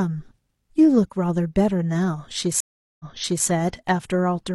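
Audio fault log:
2.60–3.47 s, stream reconnect: the speech drops out for about 0.39 s after the connection breaks. A fresh decoder then starts mid-stream. Playback resumes about 0.46 s earlier, so a stretch repeats. The first frame comes back faded in.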